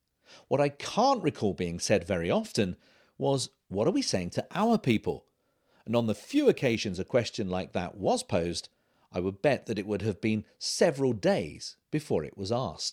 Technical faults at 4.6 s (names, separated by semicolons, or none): crude rate conversion